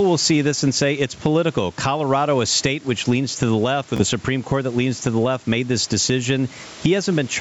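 Gain pumping runs through the whole clip. The gain swings by about 10 dB, likely from gain set too high and a fast limiter. At 3.97 to 4.04 s, just after "leans to the left", a Bluetooth stutter repeats a short slice as a brief buzz. Speech resumes about 30 ms further on.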